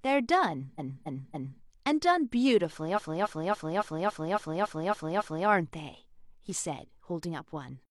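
Repeated frames: at 0.75 to 1.58 s, then 2.93 to 5.44 s, the same roughly 0.28 s block loops, a stuttering replay from compressed frames being sent repeatedly.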